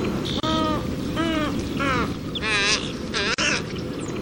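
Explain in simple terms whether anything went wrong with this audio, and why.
Yes, two things went wrong. The whole clip sounds watery and swirly, with smeared attacks and metallic chirps on hissy sounds. The likely cause is heavy MP3 compression. The encoder ran short of bits and dropped faint detail that flickers frame to frame.

There is also a gap at a join of encoded pieces, twice: 0.40 to 0.43 s, and 3.34 to 3.38 s. Each is a brief break in the sound, of about 31 and 42 ms. The pieces were encoded separately and glued together untrimmed. Then the sound resumes where it stopped.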